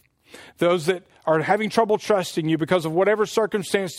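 Speech, with sample clock jitter throughout. The converter's clock wanders by a fraction of a microsecond. Faint hiss rides loud, bright sounds, roughly 55 dB down, vanishing in pauses.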